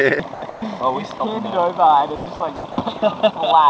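The audio cuts out four times, each gap filled with steady, featureless noise until the sound resumes: 0.34 to 0.42 s, 1.18 to 1.20 s, 2.16 to 2.26 s and 2.56 to 2.64 s. This is sound dropped by the voice detector, likely because the sender's detector mistook quiet parts of the signal for background and stopped transmitting, so the receiver substituted comfort noise. Between 10 and 70 ms of real sound is lost in each gap, the longest loss at 2.56 s.

A stretch from 0.50 to 0.62 s is comfort noise in place of the background. Nothing audible is lost there. Only the background, which sits about 19 dB below the loud parts, changes: its natural texture gives way to smoother synthetic noise about 4 dB quieter. This is likely the mark of discontinuous transmission during a pause.

What separates the two faults is whether foreground sound disappears under the noise or only the background character shifts. 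The bandwidth ends at 8 kHz, which points to a 64 kbps G.722 call codec.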